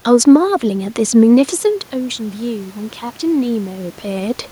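From 1.65 s to 4.45 s, automatic gain rising: after the input dropped by about 12 dB, the gain control climbed about 5 dB over nearly three seconds. Unlike the talker moving back around 1.5 s, the room noise swells along with the voice.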